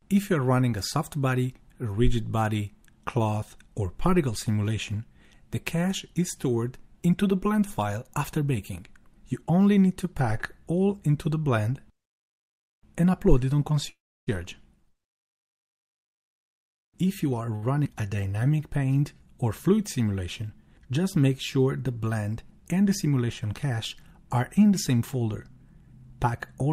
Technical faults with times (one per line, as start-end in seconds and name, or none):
13.89-14.29 call audio freeze
15.93-17.49 jitter buffer speed-up
17.55-17.64 short stall from a late packet
17.84-17.87 skip ahead
18.16-18.98 jitter buffer slow-down
25.82-26.66 jitter buffer speed-up